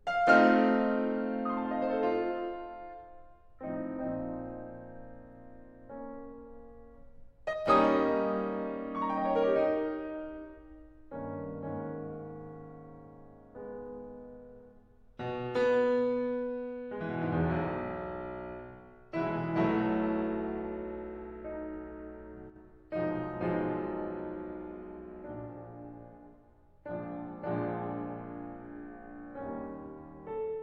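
One channel likely drops out of the stereo pair twice, from 7.53 to 7.66 s and from 22.50 to 22.56 s. In the mono sum, music common to both sides dips abruptly by about 6 dB, and anything only on the lost side briefly vanishes.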